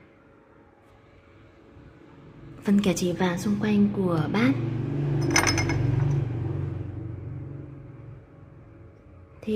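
Imaging from linear upsampling runs through the whole clip. The rate was raised by joining samples with straight lines, which filters poorly. The spectrum fits a conversion from about 22 kHz up to 48 kHz. Content near the top of the original band sounds dulled. A mirrored copy of the spectrum sits from about 11 kHz to 22 kHz, roughly 30 dB below the main sound. It adds a faint metallic shimmer to the brightest, hissiest moments.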